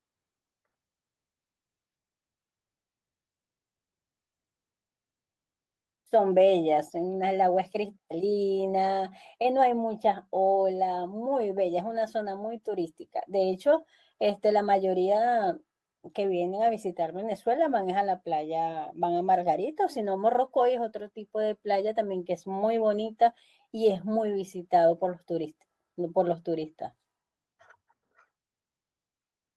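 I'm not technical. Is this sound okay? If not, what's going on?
No, there's one small glitch, just before 24 seconds, from about 23.89 to 23.99 s. That's a lost packet rebuilt from error correction: a few chunks of the speech went missing in transit, but each following chunk carried a rough backup copy, which got played instead. So there's no silence, just about 60 ms that sound grainier and fuzzier than the rest, maybe a bit duller at the top end too.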